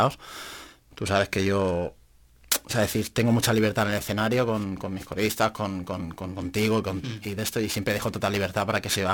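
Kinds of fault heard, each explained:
Periodic clock jitter: the converter's sampling clock is being shaken at a steady rate of around 2 kHz, so each component of the speech gains sidebands spaced that far above and below it, most strongly around the higher frequencies. It is heard as a rough, metallic edge on the speech throughout that drops away in pauses. A spectrogram shows ghost copies of the harmonics offset by about 2 kHz.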